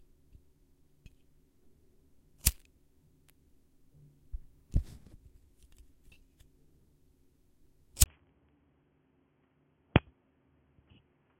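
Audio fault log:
8.04–11.39 s, input switched to a poorer device: the input likely moved to a narrower-band device mid-recording. After a 20 ms gap, nothing above 3.3 kHz comes through, so the sound turns dull and boxy, drops a few decibels, and picks up a new noise floor about 35 dB down.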